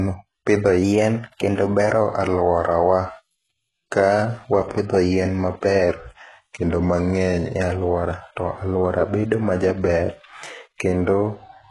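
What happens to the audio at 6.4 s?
From 5.89 to 7.54 s, just after "wapidho yien", the speech slows by about 6.4% and drops 115 cents, roughly a semitone. It then snaps back to normal before "e alwora to alwora". This is a drift correction step, likely clock-matching software that changed the playback rate in a single jump to rebalance its buffer. Unlike wow, which wobbles continuously, this is one steady offset with an abrupt start and end. Through this span, as across the whole clip, nothing sounds above 11.4 kHz and the sibilants are gritty and rebuilt. That damage is likely from heavy HE-AAC compression, and it fits a bitrate of about 12 kbps.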